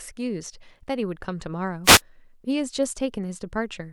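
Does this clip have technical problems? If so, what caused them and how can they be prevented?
Yes. A wireless microphone noise hit breaks into the speech from 1.84 to 2.01 s, a brief swish of static lasting about 0.17 s. The analogue FM radio link faded as reflected signals cancelled at the receiver, so receiver noise swelled over the voice. On a spectrogram it shows as a short vertical band of broadband hiss smeared across the speech harmonics; the waveform shows a noisy, ragged burst. Placing the receiver antennas in clear line of sight and using diversity reception keeps such dropouts from occurring.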